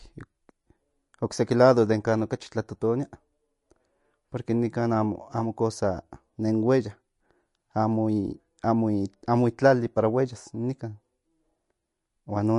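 From start to finish the speech carries plainly audible MP3 compression, likely from a low bitrate around 48 kbps. Treble is cut flat at 11.3 kHz, leaving a sharp ceiling on a spectrogram. Weak frequency lines flicker on and off between frames, giving a watery, swirly texture and smeared attacks.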